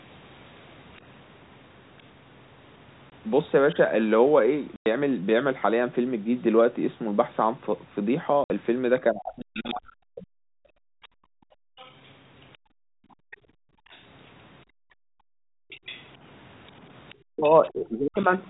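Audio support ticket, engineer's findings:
Faint second voice under the talker at 0.96 s, 0.96–1.01 s, 9.54–9.75 s, 11.02–14.03 s, 15.70–16.08 s and 17.09–18.23 s, roughly 20–35 dB down. Other side's voice leaking through, likely residual echo the canceller missed.

Hard-edged silent gaps at 3.10–3.12 s, 4.76–4.86 s and 8.44–8.50 s (20, 100, 60 ms). Packet loss filled with silence; the 20 ms multiples fit 20 ms packets.

Talker's speech dips at 9.07–10.62 s and 17.28–18.19 s, dropping by around 40 dB at worst. Speech suppressed in double talk, likely the echo canceller ducking both sides at once.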